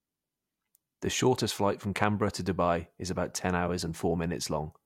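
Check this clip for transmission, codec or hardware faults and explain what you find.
Nothing stood out on listening to this speech recording.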